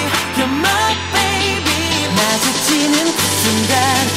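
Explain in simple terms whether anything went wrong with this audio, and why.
From 2.18 to 4.11 s, around ten uneven ticks or pops, nearly six a second, sit over the sound. This train of clicks is likely interference from nearby equipment.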